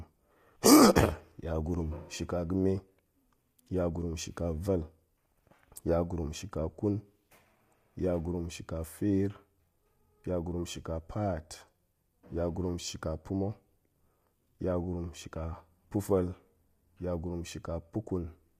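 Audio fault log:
throughout: low-delay AAC compression, rough, grainy speech with noise between harmonics and nothing above 15.5 kHz, likely short-frame AAC-ELD coding at roughly 32 kbps.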